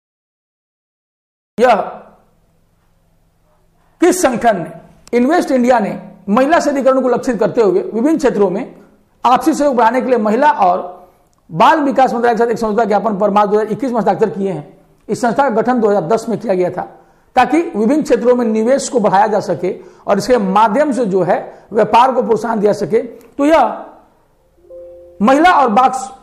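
The audio shows a cut-off start: digital silence runs from 0 to 1.58 s, then sound begins abruptly mid-event with no attack, because capture started late.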